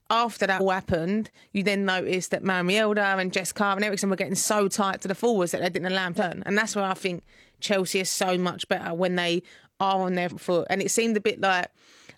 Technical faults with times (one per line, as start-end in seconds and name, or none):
0.56-0.61 compressed frames skipped
6.13-6.24 compressed frames skipped
10.27-10.33 compressed frames skipped